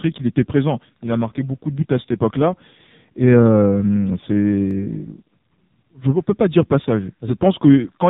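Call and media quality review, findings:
AMR narrowband mobile codec on the path, heavily degraded: band cut at 4 kHz, speech buzzy and synthetic. The coarse pulse-driven vocal-tract model points to a low mode near 6 kbps. Present throughout.

Dropped samples at 4.71 s, likely a brief gap in the sample stream where a fraction of a millisecond went missing. The waveform jumps ahead, giving one sharp click, with no audible loss of speech.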